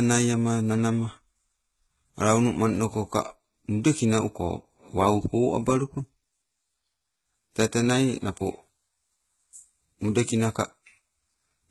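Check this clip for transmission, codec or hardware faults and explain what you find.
One codec fault runs through the whole recording. Heavy HE-AAC compression is the likely cause. The speech has no content above 11.8 kHz, and its s sounds come out gritty and lispy. The treble is rebuilt from copied lower bands rather than coded, which fits a very low bitrate near 16 kbps.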